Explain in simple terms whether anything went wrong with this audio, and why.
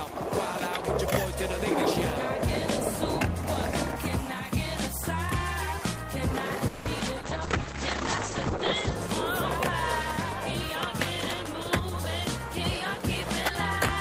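Yes, there is a cluster of problems between about 6.7 and 9.0 seconds.

At 6.67 s there is a call audio freeze. The sound stalls and is stretched into a short, fading buzz for about 180 milliseconds before carrying on from where it stopped. The likely cause is that packets were held up in the network and the receiver's buffer ran dry, so it kept extending the last bit of sound until fresh audio arrived. Nothing is lost, but a small pause has been inserted.

At 6.99 s playback skips ahead. A short piece of audio, a bit under a tenth of a second, is dropped, and the sound on either side is joined almost directly, with no audible gap.

At 7.06 s there is a short concealed packet loss. About 20 milliseconds of audio never arrived in time, and the receiver patched the hole by continuing the previous sound and blending back in. It comes across as a tiny smear or wobble rather than a clean gap.

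From 7.2 s to about 9.0 s there is a call bitrate drop. The connection's estimated capacity fell, so the encoder was told to send far less data. During this stretch the sound turns rougher and more muffled, because the upper frequencies above about 8 kHz are removed and the rest is coded more coarsely. It stays at its worst for about 1.7 seconds before full quality returns.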